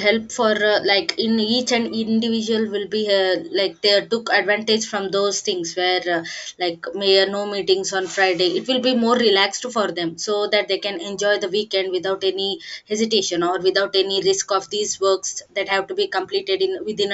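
Listening closely to the speech, nothing stood out as a technical fault at any point.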